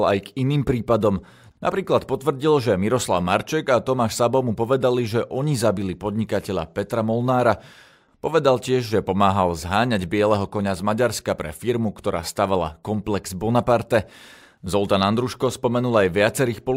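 No technical faults can be heard anywhere in this speech recording.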